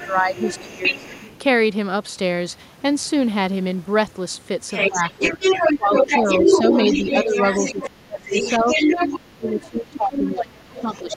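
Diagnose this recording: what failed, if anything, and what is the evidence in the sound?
A second voice leaks in at the call-processing stage, the other side's voice leaking through. It runs from 0 to 1.39 s at about 15 dB below the talker, then returns at 4.73 s and stays to the end at roughly the same level as the talker. The likely cause is an echo canceller that left residual loudspeaker pickup in the microphone path. Unlike crosstalk in analogue wiring, it is a separate voice, and it appears only where the far end would be speaking.

The talker's own voice dips in the same windows: speech suppressed in double talk. Between 0.05 and 1.05 s, and again from 4.9 to 6.7 s, about 0.7 s in each span is pulled down by around 15 dB. From 7.25 s to the end, roughly three seconds are cut by up to about 20 dB. This is likely the echo canceller failing to separate the talker from echo and attenuating both. 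Network loss would produce gaps regardless of the other voice, whereas these dips track it.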